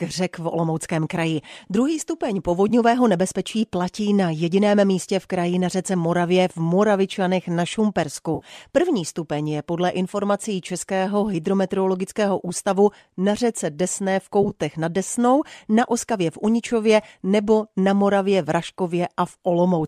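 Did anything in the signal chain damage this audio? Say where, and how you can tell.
Yes. The damage is in the network stage: AAC frame loss with concealment, in a stream that is likely low-delay AAC. Short smeared, phasey patches occur at 2.69–2.72 s (20 ms, just before "nebezpečí platí na jediném"), 8.35–8.45 s (60 ms) and 14.43–14.51 s (40 ms scattered over 80 ms, longest run about 20 ms). The decoder rebuilt the missing frames from the last good spectrum. On a spectrogram these show as blurred, noisy columns; the waveform shows no true gaps.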